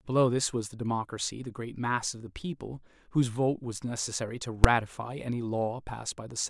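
Invalid numbers at full scale hit this speech clip at 4.64 s as a single sharp bang. A calculation returned infinite or invalid values that were pinned to the maximum level for one processing block of about 5.3 ms, which fits a 128-sample block.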